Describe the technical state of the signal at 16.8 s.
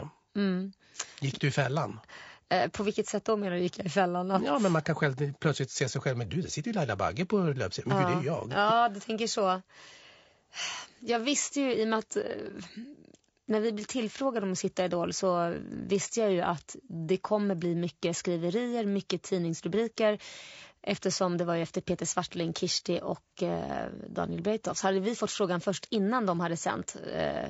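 At 16.8 s the speech sits inside a fault that runs through the whole clip: low-delay AAC compression. The voice sounds rough and grainy, with a hazy noise filling the gaps between harmonics and a top end that feels thinned or synthetic. That's likely AAC-ELD, whose very short frames can't resolve pitch harmonics well and need more bits; here the damage is plainly audible, which fits a starved bitrate around 32 kbps.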